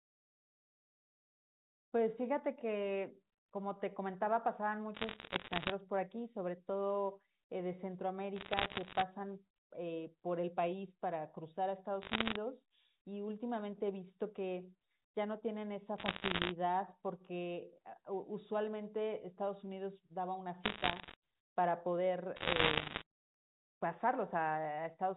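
Telephone speech with bursts of bit errors on a digital phone line at 4.94–5.72, 8.36–9.02, 12.02–12.36, 15.98–16.52, 20.64–21.14 and 22.36–23.02 s, crackling from flipped sample bits (around one percent, heavier in the last burst), seen as isolated vertical spikes on the waveform and thin full-band streaks on the spectrogram.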